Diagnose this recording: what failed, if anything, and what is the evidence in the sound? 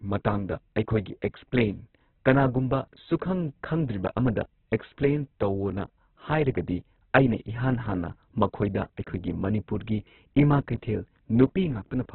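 Throughout, the speech sounds muffled, grainy and rough, with nothing above 4.2 kHz: likely heavy Opus compression at the codec stage, fitting about 8 kbps.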